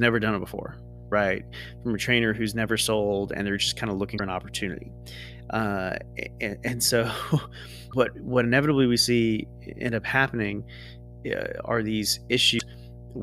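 Mains hum runs through the whole of this speech clip as a steady 60 Hz tone with low harmonics, sitting roughly 20 dB below the voice, the sign of a ground loop or nearby transformer leaking the power line into the signal path. Damaged data in a compressed stream shows up as three brief glitches, at 4.14 to 4.20 s between "they're just kind of" and "an opportunity", at 7.88 to 7.93 s just before "what inevitably we see", and at 12.55 to 12.61 s. At each one the decoder hits corrupted frames, loses sync and hunts for the next valid header, leaving a short disturbance.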